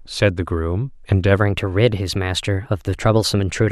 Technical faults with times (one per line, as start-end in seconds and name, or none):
1.37-3.71 section at the wrong speed